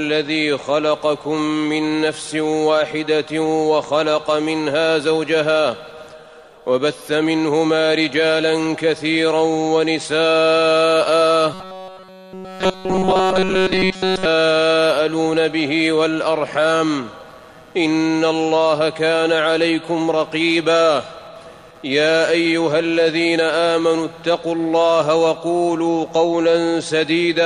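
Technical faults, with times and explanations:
Throughout: computer activity noise, a buzzing pulse near 150 Hz about 30 dB below the signal, from processor or peripheral load currents disturbing the audio circuit's shared ground.
11.54–14.25 s: robotic sound from repeated short buffers. The audio becomes a rigid metallic buzz at 188 Hz, likely from a roughly 5.3 ms chunk being replayed in place of nearly all new audio.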